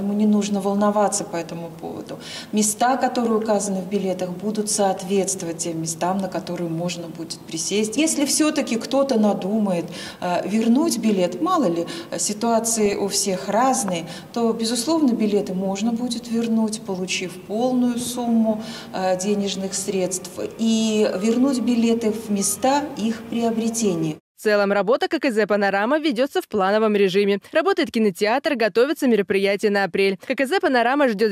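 DAB burbling breaks into the audio from 0.67 to 0.84 s and again from 12.69 to 12.96 s: weak reception lets bit errors corrupt MP2 sub-band data, producing short noise blips and level jumps in individual sub-bands, seen on a spectrogram as isolated band-limited blocks flaring for single frames.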